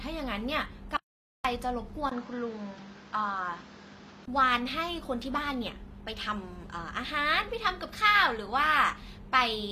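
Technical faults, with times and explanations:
Throughout, likely HE-AAC compression: the speech has plainly audible codec damage, with nothing above 14.9 kHz, and the treble sounds rebuilt rather than recorded, so s sounds turn gritty and lispy. That synthetic, metallic treble is what sets it apart from a plain low-pass cut.
0.97 to 1.45 s, audio dropout to silence: the speech stops dead for about 480 ms and resumes mid-flow. The gap is silent with no room tone, which most likely means the input was lost while silence kept being written. This is unlike a switch of device, where the sound comes back with a different tone.
2.09 to 4.28 s, input switched to a poorer device: after a 20 ms silence the speech turns dull and boxy, with nothing above 7.5 kHz, a level shift of roughly 5 dB and a new noise floor around 30 dB down. This points to a likely change of microphone, and the sound clears again at 4.28 s.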